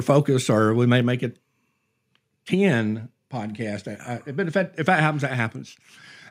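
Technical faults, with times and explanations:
1.02 s, microphone volume stepped down. Right after "focused or we may", the speech and the background both drop by about 3 dB at once. The drop is a single step, not a fade. The lower level holds from "make it" onward. The likely cause is the calling software judging the microphone too hot and cutting the device's input volume in one move. Because the gain changes before any processing, the speech and the room sound fall together.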